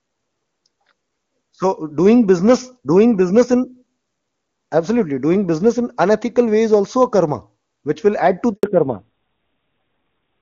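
At 8.53 s, right after "which will add to", a handover gap silences the speech for 100 ms, until 8.63 s. The call was passed between networks and no speech frames arrived during the switch, so the voice dies away within a few tens of milliseconds and anything said in that interval is lost.

From 8.63 s to the end, the call shows a fallback to narrowband. The codec drops from HD Voice to an older narrowband one, and everything above 4 kHz disappears. Compared with the clear wideband sound before the switch, the speech becomes duller and rougher, which fits AMR-NB at about 7.4 kbit/s.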